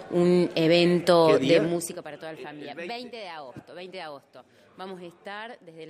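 From 1.58 s to 2.04 s the level drops by around 15 dB, and the fade carries zipper noise. The gain moves in discrete 3 dB jumps at roughly ten steps per second, with no smoothing between them. Each jump puts a small discontinuity into the waveform, so a short click lands on every step, and together they form a brief ticking, zipping texture riding on the sound for the length of the move.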